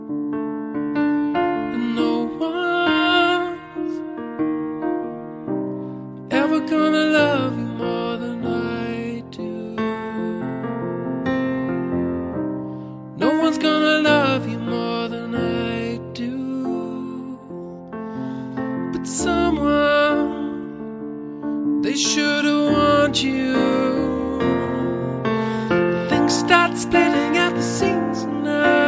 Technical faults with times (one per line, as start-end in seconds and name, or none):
none